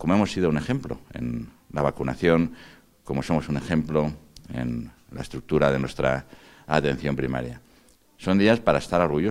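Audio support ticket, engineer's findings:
Regular ticks, 4.49 to 6.29 s, one every 0.1 s, about twenty in all. Periodic USB or driver dropouts. Bus or driver stalled by a background task. A fraction of a millisecond skipped each time. Audible only under signal.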